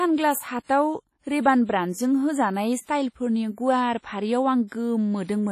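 WMA compression, likely the cause of the damage heard throughout the speech, leaves nothing above 15.1 kHz. The coding is heavy: quantisation noise is smeared across long transform blocks, so consonants and onsets ring, and the sound has a washy quality with a hiss that swells and fades with the speech. Weak spectral detail is dropped outright, which points to a first-generation encoder at a low bitrate of around 32 kbps.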